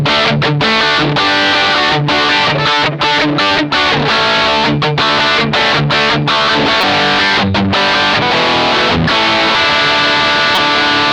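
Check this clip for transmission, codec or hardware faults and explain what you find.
There's one kind of fault here, damaged data in the compressed stream, at 6.80 to 6.84 s, 9.55 s and 10.54 to 10.58 s. Corrupted bytes throw the decoder off its frames, so it loses sync and hunts for the next header, and each spot comes through as a short chirp or blip in the sound.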